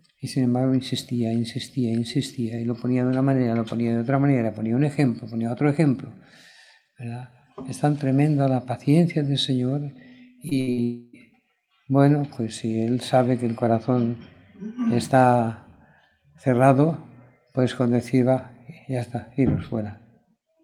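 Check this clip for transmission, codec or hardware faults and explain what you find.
Four network faults sit together in just under a second, from 10.49 to 11.15 s, and each marks a place where audio failed to arrive.

Short concealed packet loss occurs twice, at 10.49 to 10.53 s and at 10.73 to 10.79 s. About 20 ms and then 40 ms of audio never reached the decoder in time, and the receiver bridged each hole by extending the preceding sound before blending back. Each is heard as a quick smear or wobble.

A burst of packet loss falls between them, at 10.61 to 10.69 s. Roughly 60 ms went missing in one run, and the receiver held the last sound while turning it down. This gives a brief buzz or hiss that sags, after which the audio resumes later, with that stretch absent. It is longer than the short losses on either side.

A long network dropout follows at 10.83 to 11.15 s. About 300 ms is gone, filled the whole way by a continued, fading buzz or hiss rather than dead silence. 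The audio then picks up further on, without the lost part. Its length, several times that of the burst, points to a likely stall in the connection rather than a handful of dropped packets.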